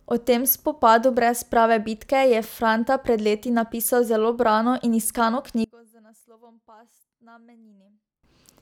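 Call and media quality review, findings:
Speech level collapses 5.64–8.23 s, dropping by about 30 dB to a faint residue; centred voice and low end nearly gone. Likely cause: one channel inverted, with reversed polarity on one stereo leg. Downstream mono sum cancels the shared content, leaving only the small inter-channel difference.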